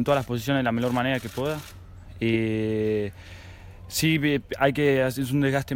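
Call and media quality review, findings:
No audible faults found in this recording.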